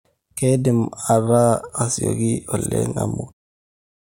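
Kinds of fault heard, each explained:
No faults are heard in this speech clip. Near the end the level eases down in a smooth fade-out, with no click or hard edge.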